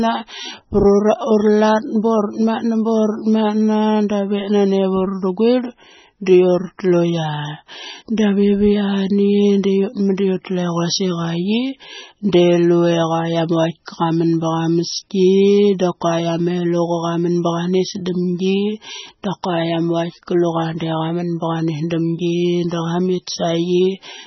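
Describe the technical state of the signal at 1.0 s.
At 1.0 s the speech is carrying heavy damage that is likely from MP3 compression, present across the whole clip. The encoder ran so short of bits, consistent with a rate of about 16 kbps, that it cut the treble away and dropped weak frequency lines that then flicker in and out between frames. Nothing survives above 5.9 kHz, so the sound is dull and muffled, with a watery, swirling texture and smeared consonant attacks.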